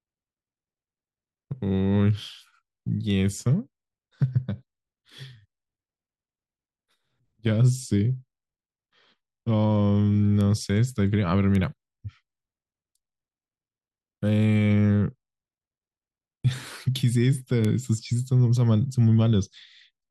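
Four isolated ticks punctuate the speech, at 3.10, 10.41, 11.55 and 17.65 s, and each one is a bit error spike. A single flipped bit throws a sample's value off by a power of two before it snaps straight back. The first spans three samples in a row and peaks around -25 dBFS. The rest are single samples, at about -13, -13 and then -7 dBFS. Each is a sharp, broadband click unrelated to the speech.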